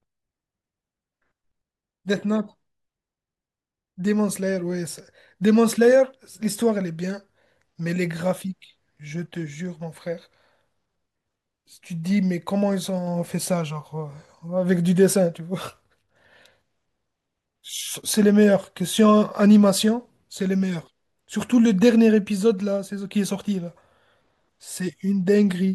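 No technical faults are audible anywhere in the speech recording.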